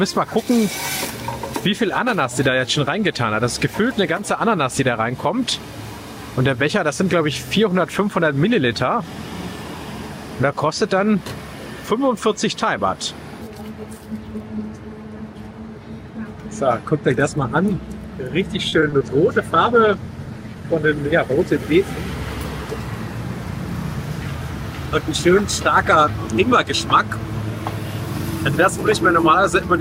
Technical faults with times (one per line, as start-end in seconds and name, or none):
18.69-19.02 repeated packet loss (robotic sound)
19.50-21.66 call bitrate drop